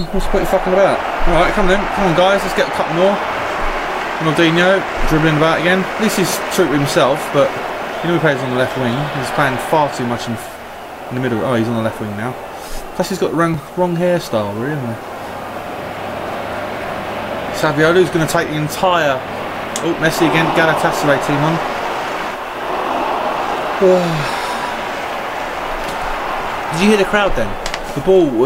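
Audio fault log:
13.54 s, dropped buffer (overrun): the sound jumps ahead with no gap, likely because incoming samples were overwritten before being read, losing under two milliseconds. The waveform shows an abrupt step discontinuity, and the spectrogram a thin full-height vertical line.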